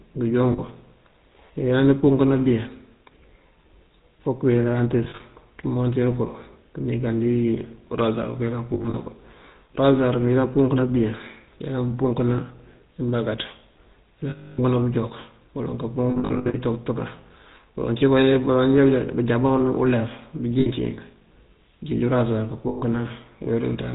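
The GSM full-rate codec colours the whole speech clip, consistent with its 13 kbps coder. A vocal-tract model driven by sparse pulses, with nothing above 4 kHz, gives a plainly audible buzzy, gravelly roughness. Brightness is gone.

Lost GSM frames break in at 0.52, 5.04, 8.74, 14.3, 16.1, 20.6 and 22.68 s. The decoder repeats the last good frame at falling level. Each gap rings rough and metallic. Losses total 60 to 320 ms. At 5.04, 8.74 and 16.1 s they come in short scattered bursts.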